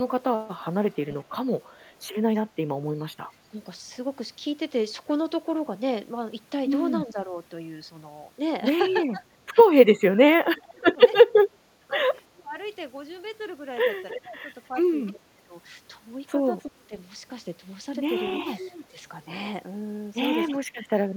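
A speech recording with two kinds of fault. Echo leak appears as a faint delayed copy of the voice, roughly 25 dB down and trailing by about 330 ms, from 0.93 to 1.85 s. It returns louder, only about 15 dB down at a 310 ms lag, from 14.1 to 20.55 s. It is likely a far-end loudspeaker echo that the echo canceller failed to remove. Speech suppressed in double talk is different: nothing is added, and the voice itself is ducked. There is a shallow dip of about 5 dB at 3.51 to 3.59 s. From 7.07 to 20.77 s, drops of up to roughly 25 dB add up to around 3 s. The likely cause is an echo canceller attenuating the talker while both sides spoke at once.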